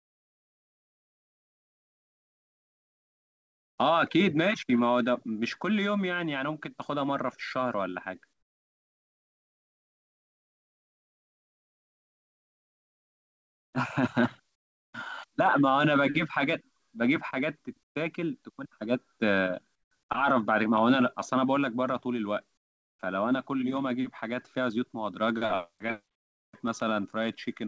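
Speech in which the background in the pauses, at 0 to 3.78 s, 8.33 to 13.73, 14.55 to 14.93, 17.83 to 17.95, 19.75 to 19.91 and 22.57 to 22.99 s, turns into a flat, featureless hiss about 13 to 27 dB quieter than the real room sound. This is comfort noise in place of the background, likely from discontinuous transmission: the sender goes quiet between phrases and the receiver fills the gap with synthetic noise. Nothing sounds above 8 kHz, which fits a wideband call codec.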